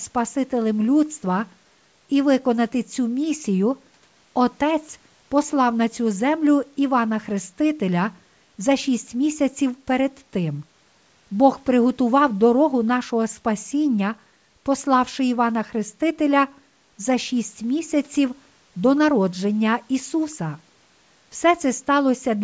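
No technical faults can be heard in this speech clip. It carries the mark of a call's microphone processing, with the lowest bass trimmed away and nothing above 8 kHz, which is how that path normally sounds.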